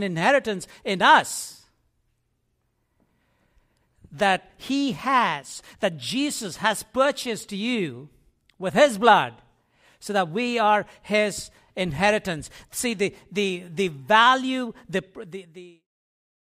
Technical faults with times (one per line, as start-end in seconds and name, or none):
none